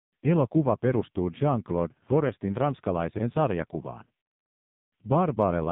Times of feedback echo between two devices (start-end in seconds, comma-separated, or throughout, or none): none